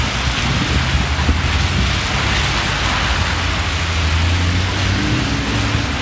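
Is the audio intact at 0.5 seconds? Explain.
Yes, the audio is intact at 0.5 seconds, with only the steady band limit of the call path, nothing above 8 kHz, consistent with a G.722 link.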